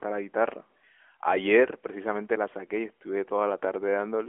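No faults are audible; the speech comes through an AMR narrowband mobile codec path, confined to a line band of about 300 Hz to 3.4 kHz with nothing above 3.5 kHz, and the light codec coloring fits AMR-NB's 12.2 kbps mode.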